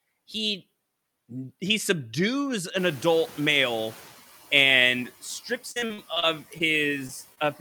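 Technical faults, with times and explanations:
2.78 to 4.12 s, noise suppressor catching up: The background noise, which jumps by about 19 dB around 3 s, comes through with little reduction at first and then sinks over about 1.34 s, to about 7 dB lower. The suppressor's noise estimate was still tuned to the quieter room when the noise rose, so it underestimated the new noise and only caught up gradually as the estimate adapted.
5.71 to 6.74 s, repeated packet loss (robotic sound): This stretch turns choppy and robotic, with pieces of the audio dropping out. Seven separate gaps fall within about one second, the longest about 43 ms, totalling about 200 ms of lost audio. The receiver patched each hole by extending the last sound, filling about 23% of the span. With holes following so closely, the repeated synthetic fills produce the mechanical, stuttering quality.
7.07 to 7.11 s and 7.35 to 7.39 s, short concealed packet loss: Each spot is a brief smear or wobble in the audio. 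About 20 ms of the signal failed to arrive in time at each point. The decoder covered the first hole with roughly 15 ms and the second with 20 ms of sound continued from what came just before, either from its pitch or as shaped noise, then blended back into the real audio.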